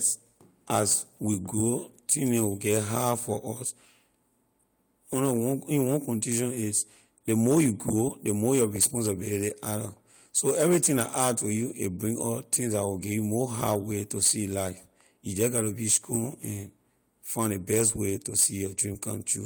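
Nothing technically wrong turns up anywhere in this speech recording, so there are no times or causes to point to.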